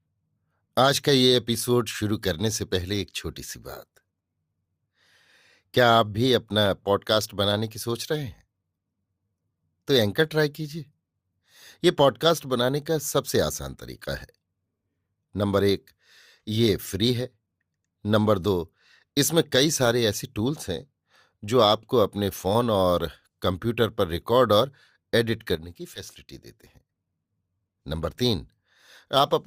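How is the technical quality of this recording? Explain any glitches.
The speech has two kinds of glitch: compressed frames skipped twice, and one sudden gain jump.

Compressed frames skipped at 6.65 s and again from 25.95 to 26.01 s: the decoder never plays one or more frames, either because they are missing or because it rejects them as damaged. The audio jumps forward by about 10 ms, then roughly 20 ms, which fits a 10 ms frame.

Sudden gain jump from 25.55 to 26.9 s: the speech and the background noise drop together by about 8 dB in a single step, with no fade. The likely cause is a digital gain change applied from one sample to the next without a ramp.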